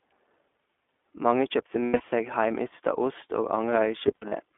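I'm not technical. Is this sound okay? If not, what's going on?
No. The whole clip has passed through the iLBC codec, a phone-call speech compressor. It keeps only the middle of the sound's range, roughly 250 Hz to 3.5 kHz, so the speech is thin and slightly rough and synthetic. Unlike plain muffling, that graininess stays the same all the way through.

There are also lost iLBC frames, at 1.84–2.02 s, just before "seg heimeysta ost", and at 4.08–4.33 s. In each stretch, missing pieces were patched with a held, buzzy sound, the longest lasting about a tenth of a second. Because each 20 ms frame stands alone, clear speech returns immediately, instead of staying garbled.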